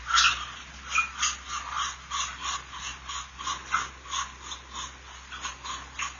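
AAC compression runs throughout this recording of sounds, with nothing above about 6.9 kHz and a plainly audible dull, smeared, fizzy texture. This likely comes from AAC-LC coding at a low bitrate, one that fits about 24 kbps, cutting off the upper band and coarsely quantising what remains.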